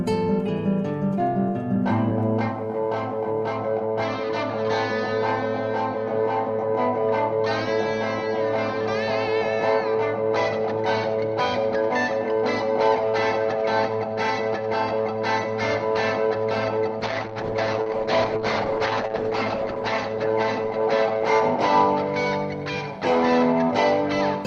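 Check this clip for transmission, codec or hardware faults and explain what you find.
There's one transmission fault, a call bitrate drop. From 17.01 to 21.84 s the sound goes rough and muffled, bottoming out for about 2.8 s, as the top end closes from 12 kHz to 8 kHz. That fits the encoder being pushed from about 32 down to roughly 9 kbps.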